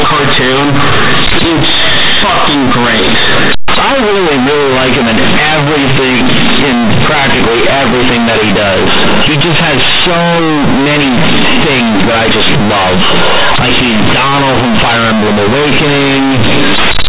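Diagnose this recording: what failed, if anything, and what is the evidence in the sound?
Loud, buzzy distortion runs throughout, with heavy noise in the pauses: companded audio read as linear, a sample-format fault where mu-law bytes play unexpanded as plain 8-bit samples.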